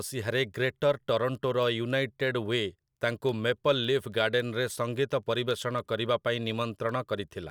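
From 0.24 s to 7.45 s, word clock ticks sound at roughly three per second. An unlocked receiver clock, about 70 ppm off, drops or repeats a sample at each slip.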